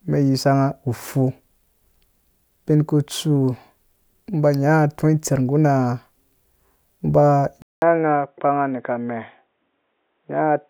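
An input switched to a poorer device is the likely cause of the change at 7.62 s in this speech clip. After a silence of 200 ms, the speech comes back boxy and dull through to the end, with nothing above 3.8 kHz, the narrow band of a lesser microphone or a headset's call profile. The new device also sounds somewhat quieter and brings its own faint background noise, sitting well below the speech.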